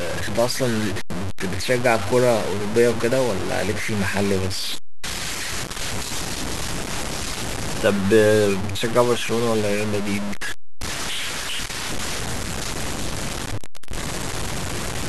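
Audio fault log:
throughout: low bit depth without dither, likely from truncation to 4 bits; error tracks the speech, giving grainy distortion about 10 dB below signal, quiet parts sputtering.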